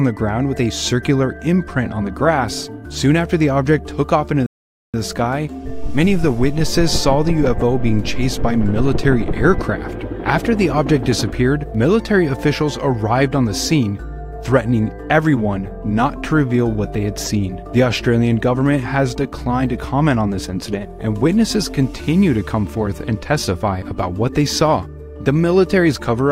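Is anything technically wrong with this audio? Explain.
Yes. At 4.46 s the sound drops into silence for just under half a second, then picks up at 4.94 s exactly where it left off. This is a rebuffering stall: playback exhausted its downloaded audio and paused until more arrived, adding about 0.48 s without losing anything.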